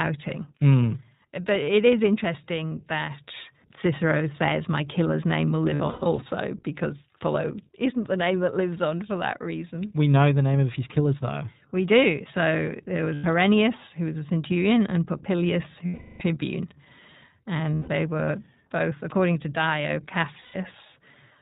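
From start to finish the speech sounds narrow and slightly rough, with a synthetic edge and nothing above 4 kHz. This is the iLBC codec, a narrowband VoIP coder working here at 15.2 kbps in 20 ms frames. Each frame's excitation is coded on its own, and at this rate the damage is plainly audible.

At 5.74 to 6.28 s the voice repeatedly smears into brief held, buzzy vowel sounds, scattered over about half a second, the longest stretch around a tenth of a second. Shorter single smears follow at 13.14 to 13.26 s, 17.74 to 17.89 s and 20.40 to 20.56 s. A longer one at 15.86 to 16.22 s fades as it goes. These are lost iLBC frames: the decoder filled 280 ms, 100 ms, 140 ms, 140 ms and 340 ms of missing audio by repeating the last pitch cycle mixed with noise. Because each frame decodes independently, clear speech returns right after each gap.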